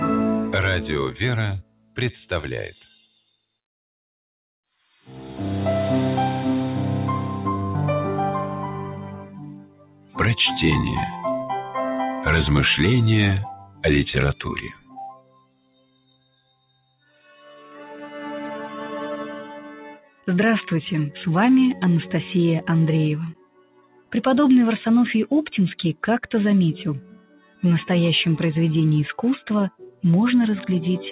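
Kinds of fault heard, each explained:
Noise suppressor applied to music or sounds: A noise suppressor tuned for speech stayed active on this audio. It treats sustained tones, ambience and reverberant tails as noise and pulls them down. Attacks pass largely intact, but held sound sinks soon after each onset, so the level pumps and flutters with a swing of around 10 dB across the whole clip. This sits on top of the narrow band, with nothing above 4 kHz, left by the G.711 call path.
Sound cut by the noise suppressor: At particular moments the suppressor took steady or decaying sound for noise and cut it harder than its surroundings. Drops reach about 18 dB at 1.62, 9.32, 23.34 and 25.94 s, about 17 dB at 13.54 and 29.7 s, about 14 dB at 19.6 s, and a milder 7 dB or so at 17.18 s. From 13.54 to 16.04 s the sustained sound is hollowed out while sharper transients still get through.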